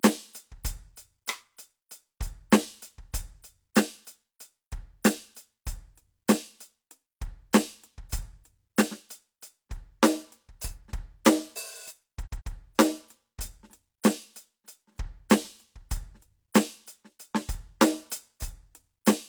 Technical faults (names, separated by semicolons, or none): repeated frames